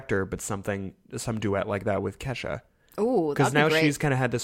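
From 0.17 s to 4.39 s the speech carries clock slip clicks, faint ticks roughly every 0.15 s, about thirty in all. Each is likely a single sample dropped or repeated as two unsynchronised clocks drift apart, around 150 ppm, showing as evenly spaced thin vertical lines on a spectrogram.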